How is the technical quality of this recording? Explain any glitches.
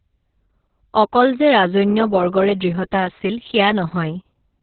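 Poor: heavy Opus voice compression runs through the whole clip. The encoder is working in its SILK linear-prediction mode at a very low rate, narrowing the band so that nothing above about 4.3 kHz survives, and quantising the excitation signal coarsely. The speech therefore sounds muffled and telephone-like, with a hoarse, buzzy, slightly robotic texture from start to finish. The damage fits a bitrate somewhere around 6 kbps.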